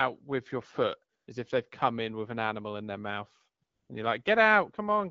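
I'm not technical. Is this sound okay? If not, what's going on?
No, there are two short glitches from AMR comfort noise. The first runs from about 1.15 to 1.27 seconds. The second runs from about 3.63 to 3.89 seconds. In those moments the phone decided nobody was talking and stopped sending the voice. The receiving phone filled the gap with made-up hiss. So the real background drops out and a smooth, even noise switches in, then switches off again. This all happens over an HD Voice phone link.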